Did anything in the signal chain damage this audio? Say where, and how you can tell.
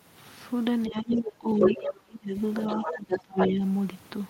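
Yes. The damage sits in call processing, in the echo canceller stage.

Speech suppressed in double talk appears between 0.88 and 2.36 s, and again from 2.76 to 3.62 s. The speech repeatedly drops by up to about 30 dB in the first span and about 25 dB in the second, for roughly a second and 0.7 s in total. On a waveform the envelope collapses in chunks. A spectrogram shows the upper bands thinning or blanking out. The likely cause is the canceller failing to separate the two talkers and turning down both.

The other side's voice leaking through shows up at 1.11–1.17 s, 1.57–1.8 s, 2.55–3.21 s and 3.39–3.52 s. Its level varies a lot: about 15 dB below the main speech, about 5 dB above it, about 5 dB below, and about level. On a spectrogram it appears as a second, overlapping harmonic pattern. The likely mechanism is residual loudspeaker echo that the canceller left in the microphone signal.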